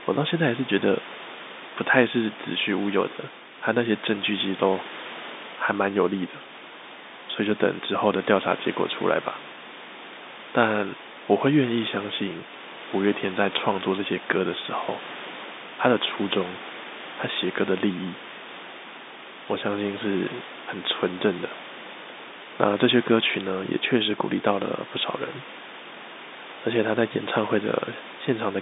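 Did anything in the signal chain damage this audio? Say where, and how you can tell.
No, nothing in the chain has damaged this speech. What can be heard is the narrow telephone band of the G.711 coding, roughly 200 Hz to 3.7 kHz, over room noise that sits about 23 dB below the speech.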